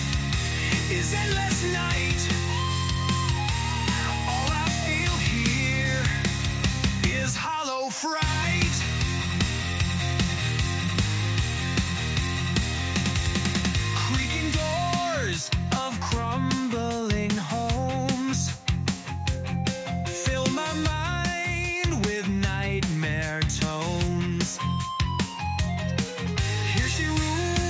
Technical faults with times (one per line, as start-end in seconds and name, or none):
none